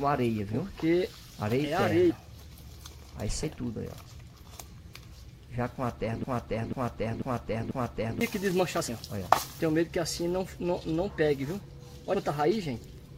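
The decoder skipped compressed frames three times, either missing from the file or rejected as damaged: a few frames at 2.09–2.11 s, 3.42 s and 12.13–12.15 s. Each time the audio jumps ahead, by roughly 0.07 to 0.1 s. Between 6.24 and 8.21 s a broken-record loop plays, most likely from a stalled player or stream resending its last buffer: a 0.49 s fragment repeats four times back to back, and the audio that should have filled that stretch is lost.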